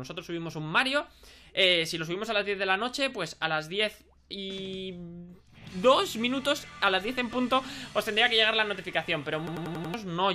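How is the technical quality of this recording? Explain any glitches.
A machine-gun stutter breaks in near the end, from 9.47 to 9.94 s: one fragment of about 93 ms repeats exactly five times, at roughly 10.8 repeats per second. This is a system hang loop. The computer or audio driver stalled while the sound hardware kept replaying the same ring buffer, whose length fits a 4096-sample buffer. The buffer is long enough to come across as a rapid stutter, and about half a second of the real audio is lost.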